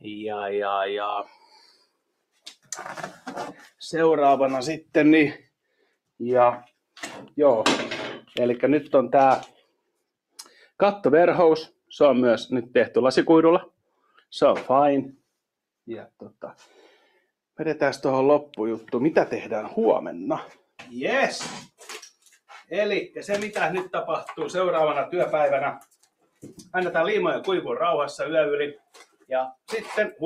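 Sound cut by the noise suppressor at 1.25–3.8, 4.85–5.96, 9.48–10.68, 13.97–14.22, 16.2–17.58, 21.67–22.71, 25.8–26.74 and 28.76–30.21 s: the suppressor mistook parts of the audio for noise and pulled them down, by about 22 dB at worst. Steady and decaying stretches sink or get clipped short, totalling up to roughly a second per event.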